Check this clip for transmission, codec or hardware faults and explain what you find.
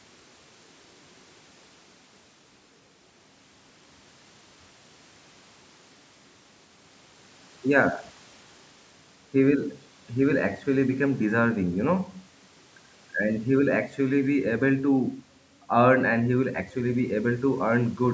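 Nothing in this clip points to a fault.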